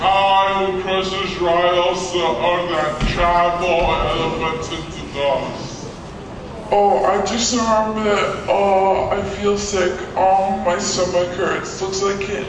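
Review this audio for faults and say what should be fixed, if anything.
The whole clip has a wrong sample rate: it runs at 0.69 speed and about 6.5 semitones low, which fits 32 kHz audio played at 22 kHz. Make sure playback uses the rate the file was recorded at, or resample properly before playing.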